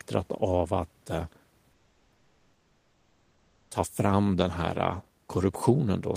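From 1.72 to 3.71 s, between "av att eh" and "ta fram den", the room background gives way to comfort noise: a steady, featureless hiss about 1 dB quieter. The likely cause is discontinuous transmission, with the receiver synthesising noise for roughly two seconds.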